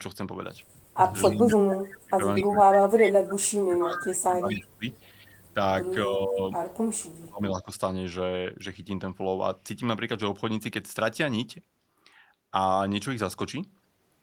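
From 0.96 to 5.59 s the speech repeatedly dips and drops out in pieces, about four seconds in all, sinking by roughly 30 dB at its deepest. It happens again, more gently, from 5.92 to 6.42 s (around 15 dB) and sharply from 6.94 to 7.7 s (around 35 dB). This is speech suppressed in double talk: the far side was most likely talking at the same moment, and the echo canceller, unable to tell the local voice from loudspeaker echo, turned everything down.

Inside that first stretch, delayed copies of the voice trail the original by 241 ms: at 1.22–1.57, 2.35–2.43, 3.01–3.11, 3.95–4.04 and 4.92–4.97 s. Most sit about 15 dB under the speech, the one at 3.01 s is louder at about 10 dB down, and the last is far fainter at about 40 dB down. This is echo leak. The likely cause is a loudspeaker at one end whose echo canceller left part of the microphone pickup behind, so it was sent back as short scraps.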